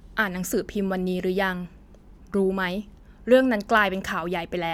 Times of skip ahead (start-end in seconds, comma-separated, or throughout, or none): none